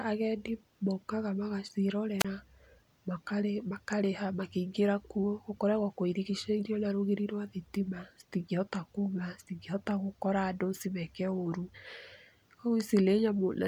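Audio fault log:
2.19–2.25 s, wireless microphone squelch dropout: the speech briefly breaks up as a short burst of hiss gives way to a hole of near silence lasting about 30 ms, and then the speech comes back. The radio link from the analogue FM microphone faded for this moment, and as the received signal weakened, noise rose until the receiver's squelch cut the output entirely. Once the signal recovered, the squelch reopened and the audio resumed.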